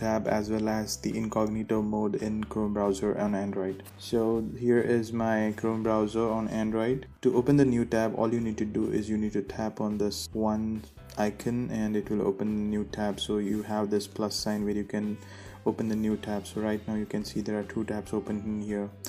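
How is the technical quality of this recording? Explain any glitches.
The recording has one clear glitch, Wi-Fi interference, from 1.59 s to 7.17 s. A nearby Wi-Fi radio's beacon, repeating every 102.4 ms, is rectified by the audio circuit, producing faint ticking about ten times a second, roughly 35 dB below the signal. A spectrogram shows evenly spaced thin vertical lines; the waveform shows small regular spikes.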